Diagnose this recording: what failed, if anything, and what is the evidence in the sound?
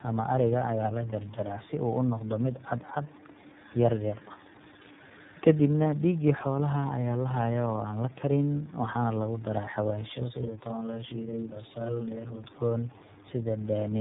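Tandem speech coding, a codec-stage fault, runs through the whole clip. The speech sounds rough, muffled and warbly, with nothing above about 3.8 kHz, and the roughness is worse than one narrowband codec would leave. The artefacts compound, which points to two low-rate speech coders in a row, fitting an AMR-NB leg and then an iLBC leg joined through a G.711 link. Each coder re-encodes the previous one's errors. A single codec or a plain low-pass filter would muffle the sound without this layered warble.

Channel delay (doubling) appears from 10.16 to 12.44 s, at the driver or buffer stage. One channel lags the other by 40 ms, and summing them to mono makes a distinct doubled copy at the same level, like a tight slap. Room reverberation would decay and spread out in time. A very short offset would instead give hollow comb-filter colouring. Here there is one discrete repeat, which points to a late buffer on one channel.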